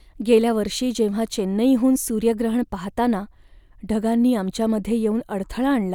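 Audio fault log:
Nothing to log here, just someone talking with no faults to report.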